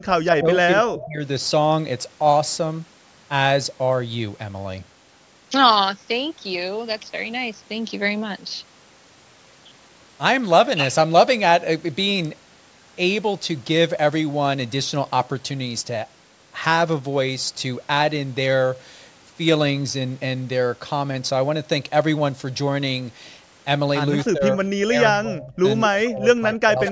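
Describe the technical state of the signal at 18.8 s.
At 18.8 s the speech signal is intact, with no fault present; only the normal call microphone processing is audible, which trims the lowest bass and leaves nothing above 8 kHz.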